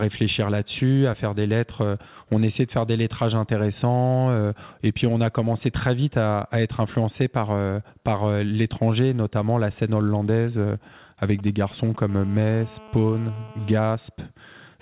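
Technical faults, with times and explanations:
11.24–11.96 s, GSM signalling bursts: a nearby 2G phone exchanging short control bursts with its network, rectified by the audio circuitry, gives a galloping run of ticks and brief 217 Hz buzzes roughly 20 dB under the speech. On a spectrogram these show as short, evenly stacked harmonic patches; the waveform shows clustered spiky pulses.
12.09–13.78 s, GSM phone buzz: the phone then transmits steadily in bursts as in a call, pulsing 217 times a second, and the rectified pulses form a hard, raspy 217 Hz buzz about 23 dB below the speech. A spectrogram shows a dense comb of harmonics stopping at the narrowband path's 4 kHz limit, and the waveform carries a regular pulsed ripple.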